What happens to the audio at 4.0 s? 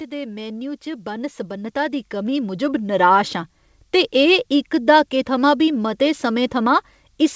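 Nothing goes wrong at 4.0 s: the speech carries on intact through that moment, with only the steady 8 kHz band limit of the G.722 call path.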